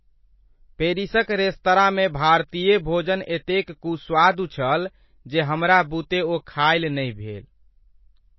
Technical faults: MP3 compression

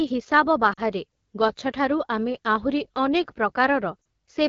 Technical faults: AMR wideband (HD Voice) codec; lost AMR speech frames

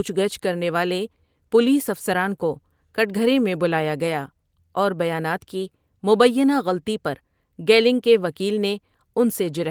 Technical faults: none

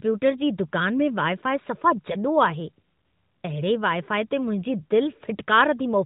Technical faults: none

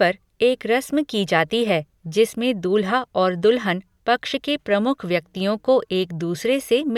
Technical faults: none

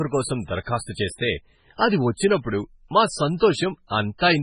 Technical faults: MP3 compression

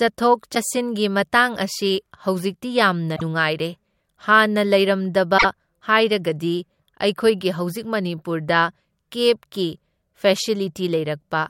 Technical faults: damaged data in a compressed stream

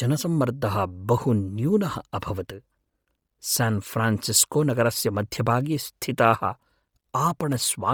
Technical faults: Bluetooth LC3 compression

